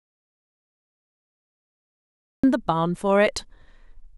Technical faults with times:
0.00-2.44 audio dropout to silence

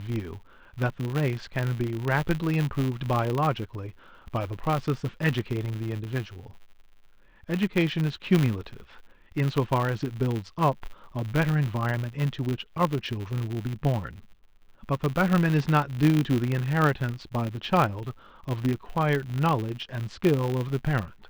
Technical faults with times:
0.00-21.29 filter restarted on every block

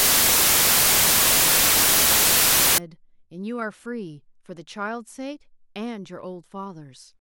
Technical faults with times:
0.00-2.78 samples built from the wrong bytes

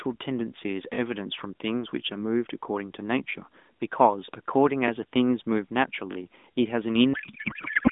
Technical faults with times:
6.12-6.16 repeated buffer
7.14-7.91 codec payload misread

